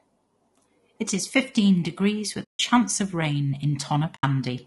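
Speech with a rough, grainy texture throughout, with noise filling the gaps between harmonics; the noise follows the voice rather than sitting underneath as steady hiss, which points to low-delay AAC compression, likely AAC-ELD at around 32 kbps. AAC frame loss with muting leaves soft-edged silent holes at 2.43–2.60 s, after "is fifteen degrees" and before "of rain", and at 4.15–4.24 s, after "of rain". The sound fades out and back in, unlike a hard dropout.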